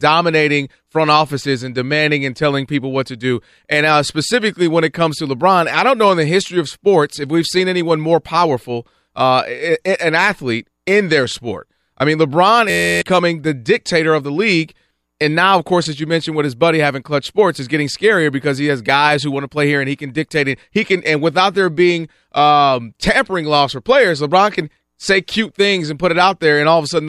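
A speech recording with a steady buzz at about 86 Hz from 12.70 to 13.02 s, just before "the dictator of the". This is a system hang loop: an 11.6 ms slice, consistent with a 512-sample buffer, repeats while roughly a third of a second of audio is lost.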